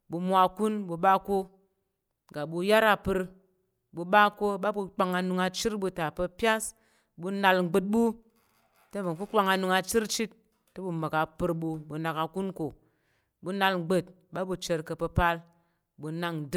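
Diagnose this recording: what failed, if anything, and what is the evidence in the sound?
Nothing failed in this recording.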